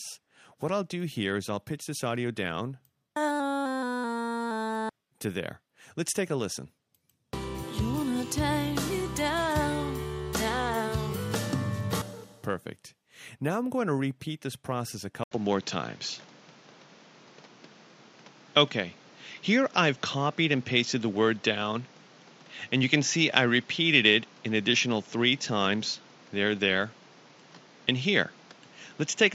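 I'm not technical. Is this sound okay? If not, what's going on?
No. After a brief gap at 15.24 s, the sound turns duller, with faint new hiss. The likely cause is an input switched to a poorer device.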